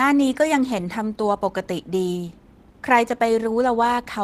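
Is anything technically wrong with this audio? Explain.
No, nothing technically wrong can be heard here.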